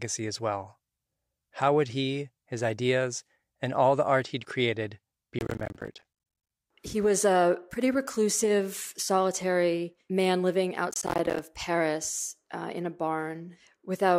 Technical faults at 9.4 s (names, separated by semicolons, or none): none